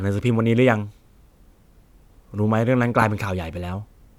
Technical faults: lost LE Audio frames

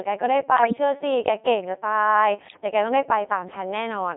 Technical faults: Codec 2 vocoder; bit errors on digital voice radio

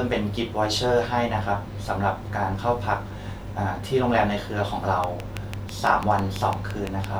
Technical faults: train of clicks

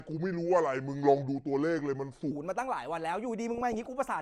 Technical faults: section at the wrong speed; DAB burbling

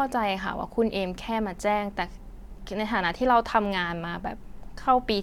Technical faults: none

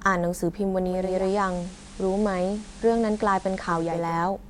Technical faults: digital radio blending to analogue

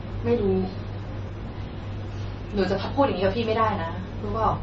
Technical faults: MP3 compression

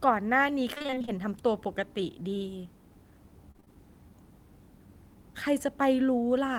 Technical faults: repeated packet loss (robotic sound)

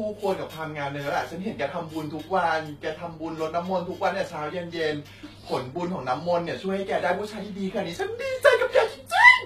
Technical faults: HE-AAC compression

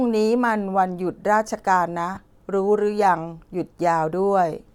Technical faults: lost LE Audio frames

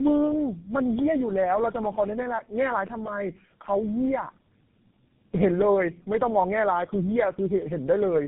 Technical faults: tandem speech coding

